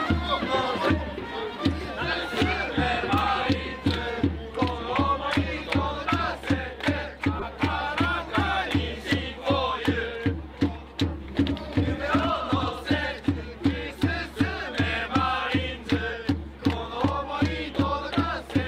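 From 7.39 to 7.43 s a corrupt frame is decoded: bits in one compressed frame were damaged, and the decoder played it anyway. Misread gains or codes place energy at wrong frequencies for roughly one frame's length, giving a brief, out-of-place burst.

Between 11.25 and 12.91 s a doubled audio track appears. A full-band copy of the sound trails the original by roughly a tenth of a second at around 5 dB lower, with no decay or room colour, and starts and stops abruptly. The likely cause is a second capture path or an edit holding two copies out of step.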